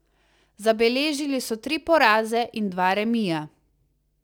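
The converter's sample clock is unstable throughout this speech recording, a case of sample clock jitter, with timing wander on the order of a few microseconds. Each sample lands slightly early or late, and the resulting error scales with how steeply the waveform is changing, sitting roughly 35 dB below the signal. The result is a fine hiss or roughness that swells on loud and bright, sibilant passages and disappears in the pauses between them.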